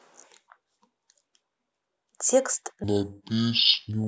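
Stereo read as mono from 2.84 s to the end of this speech: interleaved left and right samples play as one channel, giving half speed, an octave low.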